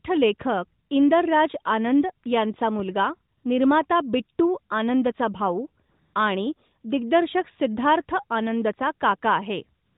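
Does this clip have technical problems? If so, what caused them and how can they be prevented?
Yes. A DC step runs from 0.41 to 2.80 s. The waveform's zero line jumps at 0.41 s, giving a low thump, and the shift lasts until 2.80 s. The speech itself is unaffected. Keeping inputs AC-coupled, or high-pass filtering, and not switching sources or recalibrating converters mid-recording prevents it.

AMR comfort noise appears in three places: 3.38 to 3.44 s (60 ms) just before "निर्माता बिट्टू आनंदचा", 5.90 to 6.14 s (240 ms), and 9.86 s to the end. The sender's voice activity detector declared silence and stopped sending speech frames, so the receiver filled the gaps with smooth synthetic noise in place of the real background. Disabling discontinuous transmission or using a less aggressive detector prevents it.

The AMR-NB narrowband band limit sits underneath throughout, with light coding damage that fits the 12.2 kbps mode.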